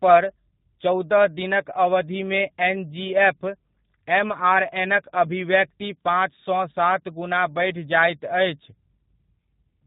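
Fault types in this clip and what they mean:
G.729 codec: A low-rate VoIP codec that models speech with a vocal tract filter and a pitch predictor, filling each 10 ms frame with a handful of coded pulses rather than the waveform itself. The damage is plainly audible throughout this speech clip. Nothing above 4 kHz survives, so sibilants sound dull, and the voice has the rough, slightly synthetic texture that fits an 8 kbit/s G.729A stream.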